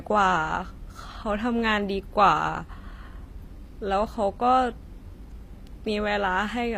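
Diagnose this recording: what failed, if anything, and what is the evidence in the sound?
The failure is at the codec stage, and it runs through the whole speech recording. The treble sounds bright but synthetic. S sounds turn gritty and metallic, and the upper harmonics don't line up with the body of the voice. The spectrum stops dead at about 15.4 kHz. The likely cause is HE-AAC compression at a low bitrate, around 24 kbps. The coder kept only the lower band and rebuilt the top by copying it upward under a coarse envelope.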